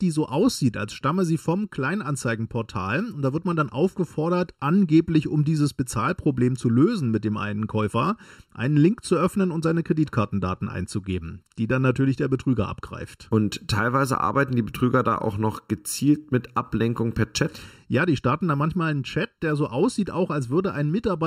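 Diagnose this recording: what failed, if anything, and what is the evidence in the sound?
One channel arrives slightly late, by well under a millisecond (roughly 0.7 ms), before the two are summed to mono. That points to a channel misalignment at the driver or buffer stage. Throughout the speech, everything common to both channels cancels at evenly spaced frequencies. This is channel delay (comb filtering): a first notch around 700 Hz, then further notches at regular intervals above it. The result is a hollow, phasey tone that never changes over the clip.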